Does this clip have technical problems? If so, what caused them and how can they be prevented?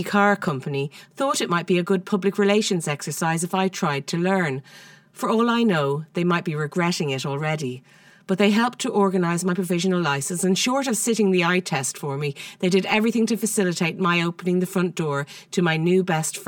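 Yes. From 0.48 s to the end, one channel arrives roughly 5 ms late before both are summed to mono. This channel delay causes comb filtering: notches repeat at even spacing from around 100 Hz upward, making the speech sound hollow and phasey. Time-aligning the channels before any mono fold-down prevents it.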